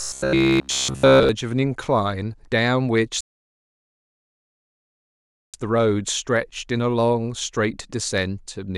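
From 0.02 to 1.29 s, audio likely arrived too seldom, so a roughly 15 ms buffer was repeated in place of all the real sound. This is robotic sound from repeated short buffers: a rigid, metallic buzz at about 66.7 Hz. From 3.21 to 5.54 s, the player ran out of downloaded audio, causing a rebuffering stall. The speech drops to silence and then resumes exactly where it stopped, adding 2.33 s.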